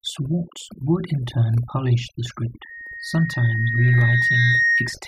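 From the start, the speech carries overdone noise removal. The noise reducer was set too hard. It cuts whole frequency bands whenever they sit near its noise estimate, taking quiet speech detail with them. The background drops and breaks up into twinkling specks.

At 2.45 s, just after "in turn polish the", a loudspeaker feedback squeal begins. The microphone is hearing its own loudspeaker, and the loop gain tops one at 1.9 kHz. That single tone swells over roughly two seconds until it sits a little above the speech. It continues to the end.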